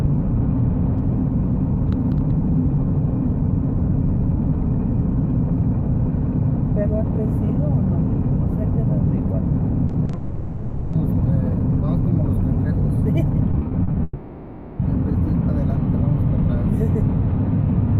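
Two bursts of repeated packet loss (robotic sound) break the audio, from 9.87 to 10.15 s and from 13.51 to 13.95 s. The first has four short holes and the second six, none longer than 40 ms, each patched by stretching the preceding sound. About a third of each span is filled this way, which gives a choppy stutter in which the real audio keeps returning between the holes. That return is what sets these bursts apart from the longer faults that follow. Each burst is soon followed by a longer hole, from 10.15 to 10.95 s and again from 14.03 to 14.81 s. There the sound is carried on as a continuous synthetic buzz for roughly three-quarters of a second, never dropping to silence, and then resumes with that stretch missing. Unlike the stutter, nothing real comes through during these holes, so they point to a long network dropout.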